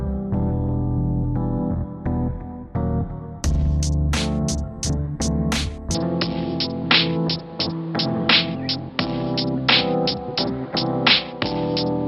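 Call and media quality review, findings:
Input switched to a poorer device at 5.95 s, likely a route change to a narrower-band microphone or headset call profile. It runs to the end, with no gap at the switch and no clear level jump. Top end stops at 5.4 kHz, so the sound turns dull and boxy. A new background noise floor sits roughly 30 dB below the signal.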